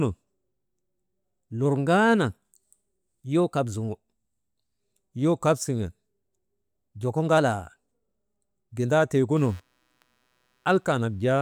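From 1.65 to 3.89 s and again from 7.38 to 8.01 s, the speech runs 5.74% fast and sits about a semitone sharp (96.7 cents) before snapping back, likely a drift correction step resampling to rebalance a buffer. From 9.36 s to the end, faint computer activity noise appears: a buzz pulsing around 150 Hz, roughly 40 dB below the speech, following machine load rather than the audio.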